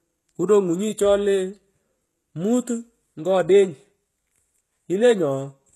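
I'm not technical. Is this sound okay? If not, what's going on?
No. The speech has plainly audible compression damage throughout: nothing above about 12.3 kHz, and the top end sounds rebuilt, so s sounds come out gritty or lispy. This is likely HE-AAC compression, which fakes the treble by copying lower frequencies upward.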